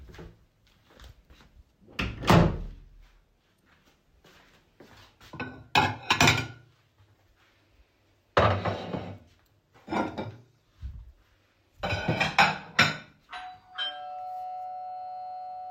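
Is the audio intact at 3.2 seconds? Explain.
Yes, at 3.2 seconds the audio is intact, with no dropout, click, distortion or other fault audible at that moment.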